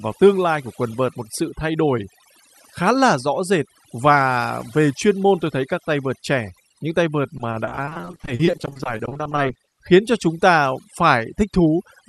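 Speech clip carried over an Opus call path whose spectrum stops near 12 kHz, and overdone noise removal runs throughout: the background is near silent with twinkling specks, and a spectrogram shows isolated bright dots and holes in the frequency bands. From 7.37 to 9.73 s, between "trẻ những tay vợt" and "khiến cho chúng ta", repeated packet loss makes the sound choppy and robotic. The waveform shows dozens of patched gaps, each up to 40 ms, filling about a third of that stretch.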